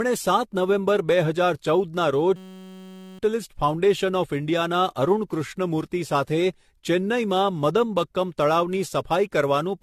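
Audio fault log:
throughout generation loss: repeated AAC encoding, likely around seven passes, leaves swirly, hollow speech; spectrogram shows spectral holes and nothing above 14.3 kHz.
2.36–3.19 s system hang loop: a 5.33 ms slice repeats at 188 Hz, a steady buzz; waveform shows identical periodic cycles replacing roughly 0.7 s of speech.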